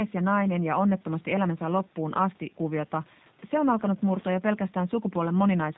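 From start to finish, the speech carries the sound of the G.729 codec, plainly audible. The codec rebuilds each 10 ms frame from a vocal tract filter, a pitch estimate and a few pulses, not the real waveform. Nothing above 4 kHz survives, so sibilants lose their edge. The voice sounds rough and slightly synthetic, though still intelligible. The coarseness fits a low rate of about 8 kbit/s.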